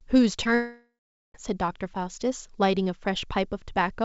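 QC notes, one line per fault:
0.44–0.47 s, short concealed packet loss: a brief smear where about 20 ms never arrived and the decoder stretched the preceding sound to bridge the hole.
0.55–1.36 s, long network dropout: a fading buzz, then about 0.43 s of silence, and sound returns with a piece missing, likely because about 0.8 s of audio never arrived.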